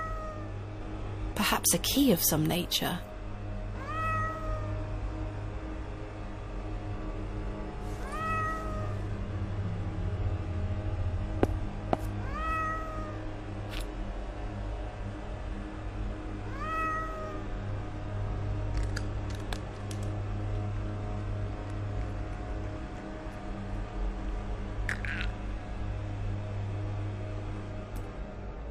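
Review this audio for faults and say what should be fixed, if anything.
Nothing stood out on listening, so there is nothing here that needs fixing.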